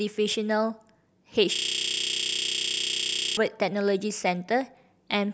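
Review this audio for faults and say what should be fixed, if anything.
From 1.56 s to 3.37 s the speech locks up into a system hang loop: a single 32 ms slice replays back to back, about 57 times, giving a low rattling buzz at roughly 31 Hz instead of speech. The machine or driver stalled while the audio hardware kept cycling its ring buffer, and the loop length fits a 512-sample buffer. To prevent it, find what's blocking the audio thread and add a watchdog that mutes output when the buffer stops being refilled.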